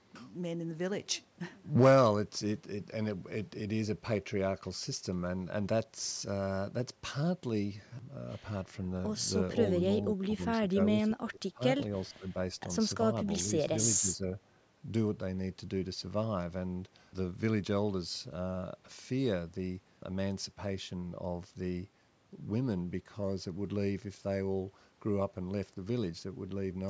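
Speech, with the level dipping in short bursts at 10.23–10.43, 10.6–10.77, 10.95–11.62, 12.11–12.28 and 14.01–14.32 s, by roughly 15 to 25 dB at the worst and only slightly in the last. This is likely speech suppressed in double talk, where an echo canceller attenuates the near talker along with the far-end echo.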